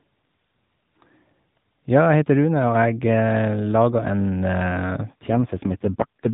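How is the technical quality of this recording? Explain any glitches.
The recording has one glitch near the end. Throughout, the audio is band-limited telephone speech with nothing above 4 kHz and light coding roughness, which fits the AMR narrowband mobile codec running at its top rate of 12.2 kbps.

AMR rate drop, from 5.3 s to the end: the link appears to force the codec onto far fewer bits, consistent with a fall to about 4.75 kbps. The bandwidth stays the same and there is no gap, but the voice turns buzzier and more synthetic.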